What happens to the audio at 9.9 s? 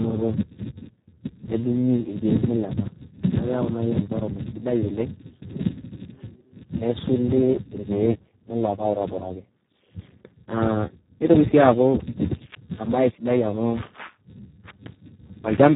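At 9.9 s the speech carries heavy Speex codec damage, present throughout the clip: starved of excitation bits at what sounds like roughly 4 kbps, it turns hoarse and noisy, with nothing above 3.9 kHz. That coarse, noisy texture sets it apart from a simple low-pass.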